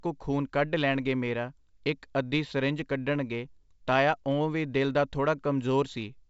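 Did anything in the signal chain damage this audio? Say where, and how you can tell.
No, nothing in the chain has hurt this speech; it just sounds like a normal G.722 wideband telephone path, with the top end stopping at about 7.7 kHz where that coding runs out and hardly any trace of the coder beyond that.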